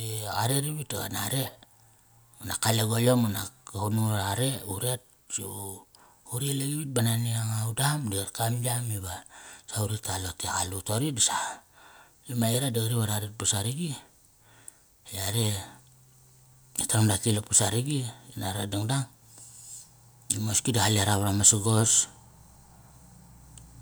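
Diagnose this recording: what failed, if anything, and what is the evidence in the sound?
Nothing in the recording points to a failure at any stage between capture and playback. The speech contains no audible event that would call for a diagnosis.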